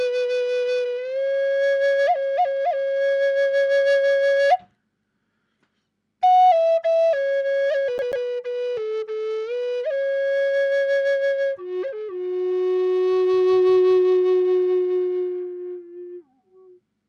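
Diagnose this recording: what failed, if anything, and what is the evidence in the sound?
Playback's the culprit here: a CD stuck on one turn. From 7.98 to 8.26 s, a roughly 137 ms slice of sound plays twice with a tiny mute at each jump, that quick, even stutter you get when a scratch keeps kicking the laser back one track.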